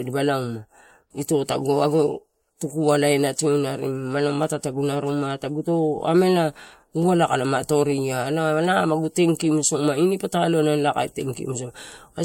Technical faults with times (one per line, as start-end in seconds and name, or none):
0.00-12.25 low-bitrate audio saved at a high bitrate